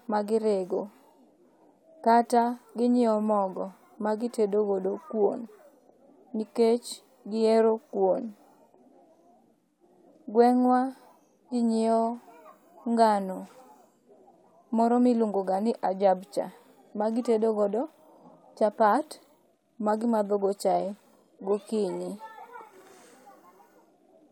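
Speech recording with no technical faults to report. Nothing in the audio points to a problem in how it was captured, processed or delivered.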